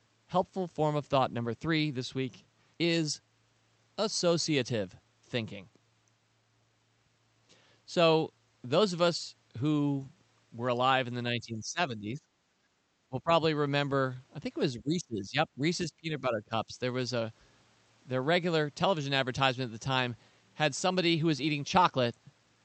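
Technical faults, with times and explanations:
11.28–12.2 s, 13.09–13.3 s, 14.76–15.37 s, 15.55–15.62 s and 15.88–16.78 s: speech suppressed in double talk. The voice sags by up to around 25 dB or breaks into fragments, likely because the echo canceller could not separate overlapping talk from loudspeaker echo.
12.49–12.81 s: background gated by the echo canceller. While the loudspeaker plays, the microphone is pulled down about 12 dB. The room sound drops for about a third of a second and returns when the canceller releases.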